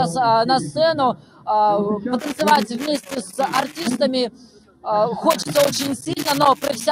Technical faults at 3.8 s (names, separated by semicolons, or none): noise suppressor applied to music or sounds; loose connector crackle